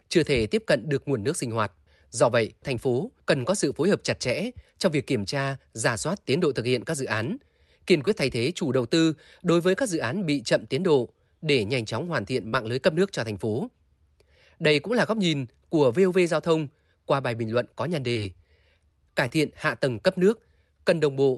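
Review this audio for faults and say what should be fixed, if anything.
Short concealed packet loss at 8.05 to 8.09 s, 12.49 to 12.54 s, 18.12 to 18.18 s and 19.28 to 19.32 s. Each time, roughly 20 to 40 ms of the speech reached the decoder too late to be played. The receiver bridged the gap by stretching the sound just before it, pitched where voiced and as shaped noise where not, then crossfaded back. Each dropout is heard as a brief smear or wobble against the Opus call audio, whose top end stops near 12 kHz. Turning on Opus in-band forward error correction and giving the jitter buffer more headroom on a steadier network would keep these gaps from reaching the listener.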